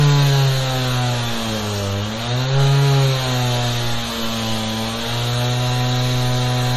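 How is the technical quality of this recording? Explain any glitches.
The recording has plainly audible compression damage from start to finish. Throughout, the sound has a watery, swirling quality, transients smear, and nothing is present above 13.9 kHz, so the top end sounds dull and closed off. This is likely MP3 compression at a low bitrate, which fits something around 40 kbps. Starved of bits, the encoder chops the treble at a fixed point and drops quiet frequency components, which flicker in and out between frames and cause that swirl.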